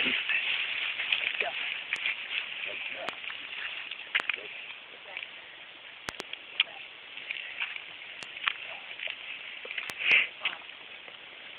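A sudden voltage step, likely from a plug, switch, static discharge or driver glitch, is landing on the signal path, and the stages after it shape it into a loud pop roughly 20 to 25 dB above the audio, which runs on underneath. Single sharp pops hit at 1.96, 3.09, 4.20 and 8.23 s. Paired pops in quick succession occur from 6.09 to 6.22 s and from 9.90 to 10.14 s.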